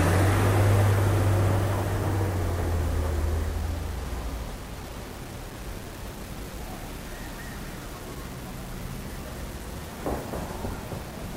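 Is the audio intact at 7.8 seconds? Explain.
No. At 7.8 seconds, as across the whole clip, the sound carries low bit depth without dither. Its likely cause is rounding to about 6 bits, which leaves only a few amplitude steps. The error follows the signal, so quiet passages turn gritty and the faintest details sputter or vanish. The residue sits roughly 20 dB below the sound. A zoomed waveform shows a coarse staircase. A spectrogram shows signal-dependent grain that rises and falls with the sound instead of a steady floor.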